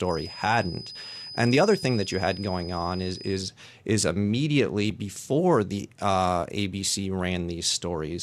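From the start to 3.48 s, just before "is immediately before the", a feedback whistle sits at 5 kHz, roughly 15 dB under the speech. It's likely a speaker-to-microphone loop held at the edge of feedback.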